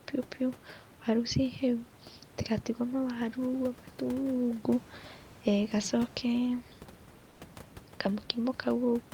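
From 7.29 to 7.39 s, comfort noise replaces the background, likely from discontinuous transmission: a flat hiss about 3 dB quieter, smooth and featureless on the spectrogram.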